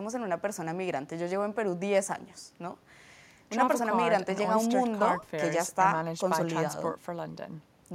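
No technical faults are audible.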